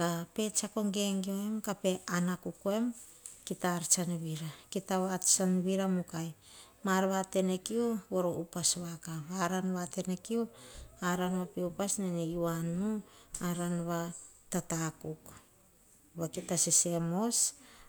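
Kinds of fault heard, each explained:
No technical faults can be heard in this recording.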